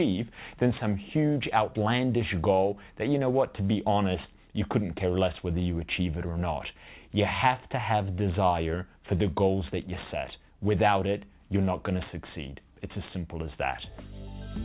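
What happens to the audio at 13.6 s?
Nothing goes wrong at 13.6 s: the audio plays through intact, carrying only the steady narrowband character of the call path with no content above about 4 kHz.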